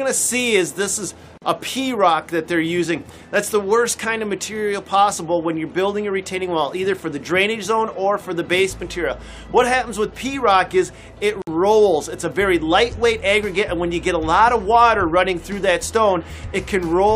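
At 1.38 s and 11.42 s, ten seconds apart, gaps at joins of encoded pieces open for 42 ms and 54 ms. Untrimmed encoder delay and final-frame padding interrupt the sound, which then resumes.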